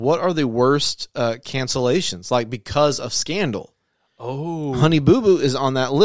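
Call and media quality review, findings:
No audible faults found.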